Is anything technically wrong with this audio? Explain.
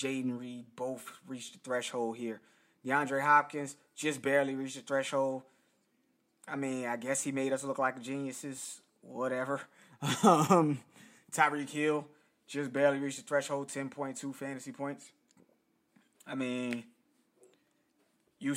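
No, nothing technically wrong stands out here; it's a speech recording with no faults to point to.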